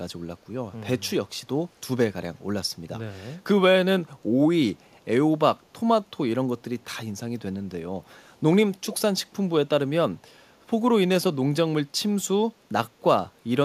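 Speech with an echo leak: faint delayed copies of the voice trail by 404 ms at 1.01, 4.18, 4.92, 6.81, 8.1, 8.82, 9.25 and 10.6 s. They sit about 40 dB down, apart from 1.01 s at about 35 dB down and 8.82 s at about 20 dB down. Room reverberation decays smoothly, but these are brief scraps at one fixed lag, likely residue a loudspeaker-side echo canceller failed to remove.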